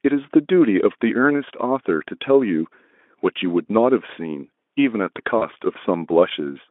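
At 5.37 s, VoIP packet loss concealed by the speech codec begins. About 40 ms of audio went missing, which fits two 20 ms frames. The Speex decoder filled the gap by extending its last sound. It turns into a buzzy tone or coloured noise and fades, staying weak until about 5.47 s.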